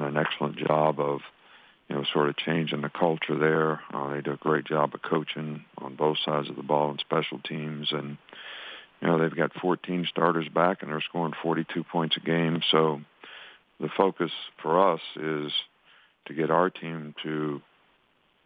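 No technical faults can be heard anywhere in the audio.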